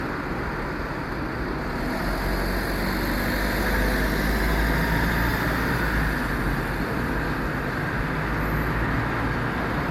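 From the very start and all the way through, this has classic generation loss. The sound has a swirly, smeared quality with a hollow middle, and transients blur instead of snapping. The likely cause is repeated lossy re-encoding, something like seven MP3 passes at a rate that fits 96 kbit/s, each one quantising on a shifted frame grid so the holes and noise pile up. Nothing reaches above 19.9 kHz.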